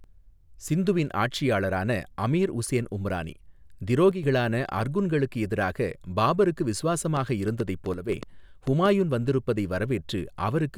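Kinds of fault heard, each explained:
One channel drops out: the speech level falls abruptly by about 6 dB for brief stretches, at 4.11 to 4.23 s and 7.94 to 8.09 s. This is likely because one stereo side vanished before the mono sum. On a waveform it shows as a sudden step down in amplitude, and on a spectrogram as a uniform dimming across all frequencies.
Train of clicks: from 7.17 to 8.87 s, just after "எதிராக பாபருக்கு", about seven similar clicks tick over the speech at roughly 4.1 per second, unevenly spaced and peaking about 5 dB above the signal. Likely interference or an interface fault. Each click appears as a thin vertical broadband line on a spectrogram and a sharp spike on a waveform.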